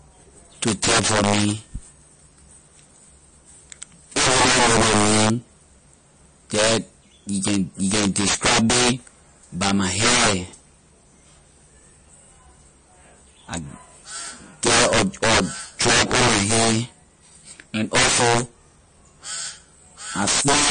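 From start to finish, the loudest moments of this speech crack harshly. This is integer overflow: the signal is driven about 13 dB past full scale, and instead of being held at the limit, each peak that exceeds it wraps around to the opposite extreme. Roughly one sample in twenty is affected, so every loud syllable carries violent snaps far sharper than ordinary clipping. On a waveform the peaks jump abruptly from top to bottom rails, and a spectrogram shows bright vertical broadband streaks at each one.

Underneath, and also throughout, the speech sounds watery and swirly. Sibilants turn metallic and chirpy, and consonant onsets lose definition. Nothing is present above about 9.4 kHz, so the top end sounds dull. This is likely MP3 compression at a low bitrate, in the region of 34 kbps, where the encoder cuts the treble and drops weaker frequency components frame by frame. On a spectrogram there is a hard horizontal ceiling at 9.4 kHz, and below it the faint detail appears as flickering, patchy blocks instead of smooth texture.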